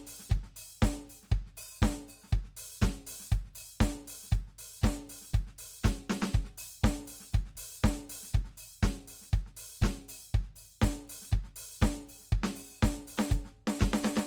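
A music clip whose tones sound noisy, rough and grainy throughout, with the damage plainly audible even though the band reaches up to about 20.2 kHz. The likely cause is Opus compression in its CELT music mode, at a rate that points to roughly 24 kbps.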